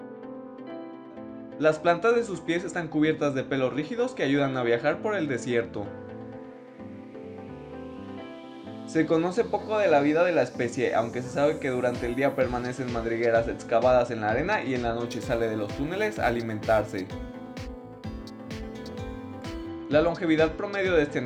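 Between 15.06 and 19.68 s the sound picks up a gritty, inharmonic fizz riding on the louder and brighter parts, the signature of crude rate conversion. Here samples look to have been simply repeated to stretch one rate to another, with no filtering, which fits a 44.1 kHz to 48 kHz change. That leaves a repeating error pattern producing tones unrelated to the material, sitting roughly 30 dB below the signal.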